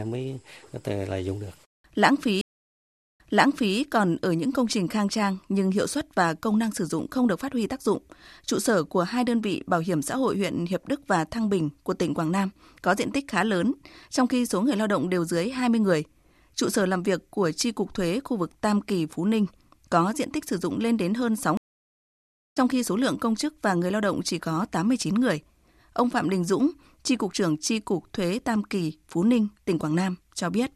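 Two stream reconnect dropouts here. At 2.41 s the speech cuts out for about 0.73 s, then a fresh decoder picks up 0.62 s earlier, so you hear a short stretch repeated. At 21.57 s it goes silent for 0.95 s and comes back roughly 0.7 s further on, skipping that bit.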